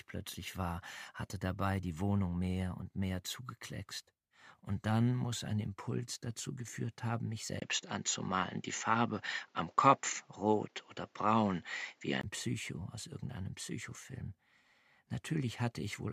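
From 7.60 to 12.23 s, input likely switched to a poorer device: a 20 ms gap, then duller sound with nothing above 7.6 kHz and new hiss.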